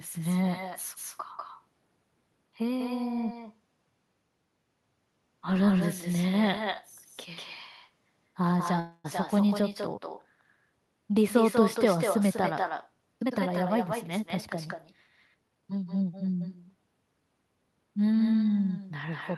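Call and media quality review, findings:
Echo with no canceller, throughout: every phrase trailed about a fifth of a second later by a thinner copy, about 8 dB down. Far-end loudspeaker-to-mic path, no AEC. Spectrogram: quieter delayed duplicate of each harmonic stack; waveform: smeared decays.

Call audio freeze, 8.79 to 9.06 s: sound held as a fading buzz or hiss for 250 ms, then resumes where it stopped, nothing lost. Likely a jitter-buffer underrun from delayed packets. Spectrogram: horizontally stretched frozen spectrum; waveform: repetitive decaying envelope.

Jitter buffer speed-up, 13.2 to 14.75 s (111%) and 15.34 to 15.79 s (114%): hurried delivery, pitch unchanged. Receiver trimming pitch-period chunks to drain excess buffer, roughly a fifth of a second then a short fraction removed. Waveform: compressed syllable spacing, no pitch shift.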